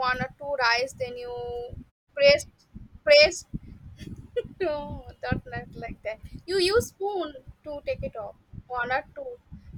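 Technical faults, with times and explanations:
No technical faults can be heard in this speech. In the pauses the background fades down to silence and comes back in time for the next sound, with no speech lost.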